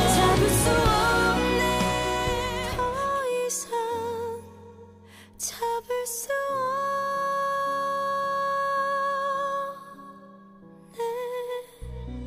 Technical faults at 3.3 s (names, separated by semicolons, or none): none